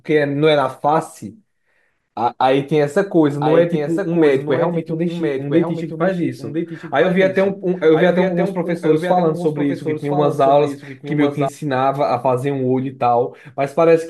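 Speech with a doubled audio track from 3.31 s to 11.49 s. A dry second copy trails about a second behind, somewhat quieter, starting and stopping abruptly. A slower second capture path is the likely cause.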